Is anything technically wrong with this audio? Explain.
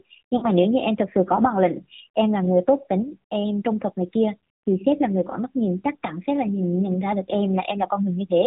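Yes. Throughout, the speech carries AMR narrowband mobile codec damage. Nothing above 4 kHz survives, and the low-rate vocal-tract model with sparse pulse excitation makes the speech plainly buzzy and synthetic, which points to a mode near 7.4 kbps.

Lost AMR speech frames occur twice, from 0.38 to 0.47 s and from 5.30 to 5.35 s. The decoder fills each gap by repeating the last pitch and vocal-tract settings at falling gain. The first gap fits about 40 ms, or two frames, and is heard as a short smeared dip. The second fits a single 20 ms frame and is a briefer warble.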